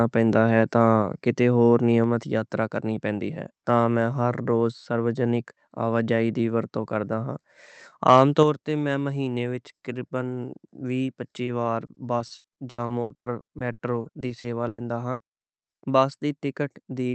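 Microphone overload at 8.08 to 8.2 s in this speech recording flattens the loudest peaks, by about 1 dB over the limit, giving a brief harsh crackle, likely from input volume set too high. Microphone volume stepped down at 8.43 s, just before "تے میں مہینے وچ", where voice and background drop suddenly by about 5 dB, likely as the call software cuts input gain after that distorted peak. Repeated packet loss (robotic sound) runs from 11.45 to 16.0 s after "وی پچی", with frequent short dropouts up to 100 ms patched by stretching prior sound, so roughly a quarter of that stretch sounds choppy. The Opus call path limits the audio to an 8 kHz bandwidth.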